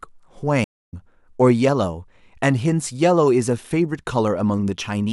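At 0.64 s a stream reconnect drops the connection, leaving 255 ms of silence; speech resumes at 0.94 s, roughly 0.2 s further along, so material is skipped.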